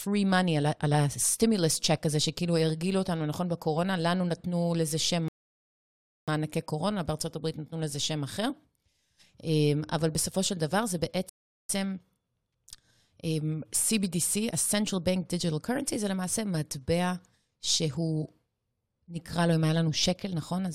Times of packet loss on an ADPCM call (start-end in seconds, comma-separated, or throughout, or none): none